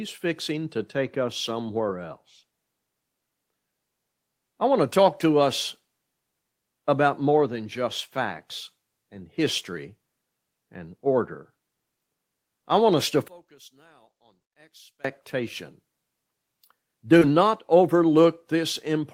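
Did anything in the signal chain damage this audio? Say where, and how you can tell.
Yes. Between 13.28 and 15.05 s the speech level drops by about 29 dB. This is most likely one channel inverted in the analogue wiring, so the shared centre content cancels when summed to mono. A spectrogram shows energy nearly vanishing across the whole band, and the waveform shrinks abruptly.

At 17.19 to 17.23 s, network delivery failed and there was short concealed packet loss. About 20 ms never arrived, and the receiver extrapolated 18 ms of it from the preceding sound before blending back. It is heard as a brief smear. On a waveform it appears as a smoothed, repetitive patch with a soft seam.

From 17.21 to 17.23 s, the codec rebuilt one lost 20 ms packet from the error-correction copy carried in the next packet. The decoder played that low-bitrate copy, so there is no gap, but that stretch sounds rougher and noisier. 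The spectrogram shows a grainier, less defined texture there.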